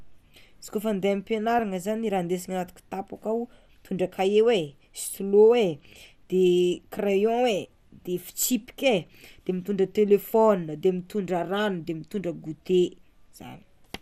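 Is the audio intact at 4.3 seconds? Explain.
No, at 4.3 s the speech carries MP2 compression artefacts, present throughout the clip and likely from a low-rate Layer II encode, perhaps near 80 kbps. Starved sub-bands switch off and flicker, giving a dull, gurgling, granular sound; a spectrogram shows blocky, patchy upper bands blinking out.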